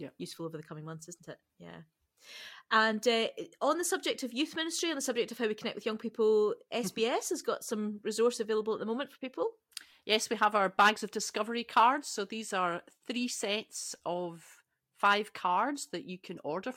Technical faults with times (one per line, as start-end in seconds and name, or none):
none